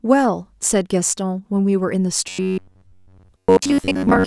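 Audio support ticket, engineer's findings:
Robotic sound from repeated short buffers, 2.29 s to 4.26 s. Speech collapses into a rigid metallic buzz near 94 Hz, roughly tracking the words. Likely cause: audio arriving too seldom, so playback loops the last ~10.7 ms buffer in place of most of the incoming audio. Spectrogram: flat, evenly spaced harmonic comb at multiples of 94 Hz. Waveform: identical ~10.7 ms cycles repeating back to back.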